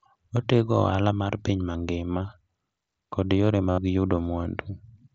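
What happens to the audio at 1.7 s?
At 1.72 to 1.75 s, about 22.5 ms of speech was lost between the Bluetooth headset and the phone, a gap that fits a short run of around three lost packets. This is concealed Bluetooth headset packet loss: the receiver filled the hole by repeating the best-matching stretch of the last 20 ms or so of waveform. The patch is heard as a brief buzzy tone held at full level, with a small warble where the real speech resumes.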